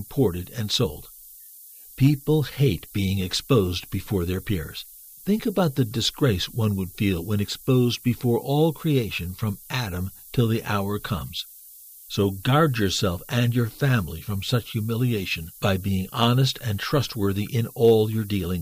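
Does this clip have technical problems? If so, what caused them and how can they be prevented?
Yes. Low bit depth with noise shaping runs throughout: the speech was quantised to very few bits, which fits 7-bit words, with the rounding error pushed upward, leaving a steady, thin hiss rising toward the top, only about 20 dB below the speech. Keep at least 16 bits through every processing and export stage.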